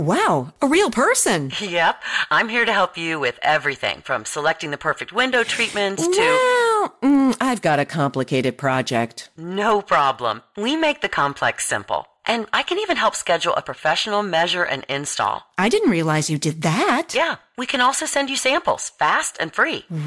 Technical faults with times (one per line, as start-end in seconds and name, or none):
0.00-20.06 resampler restarted on every block